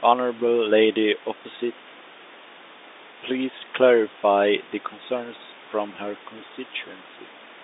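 No technical faults can be heard in the speech, which carries the narrow telephone band of G.711 mu-law coding, roughly 250 Hz to 3.7 kHz, over a room noise sitting about 21 dB below it.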